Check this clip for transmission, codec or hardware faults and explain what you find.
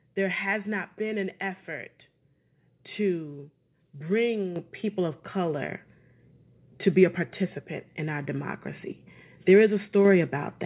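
There are two microphone volume stepped up faults. At 4.56 s, the call software judged the microphone input too quiet and raised the device's input volume in a single jump of about 8 dB. This happens just before "people of color". Voice and background noise both get abruptly louder together. At 10.05 s a second step of about 4 dB repeats the effect more mildly. The audio carries nothing above 4 kHz, which fits narrowband G.711 mu-law call coding.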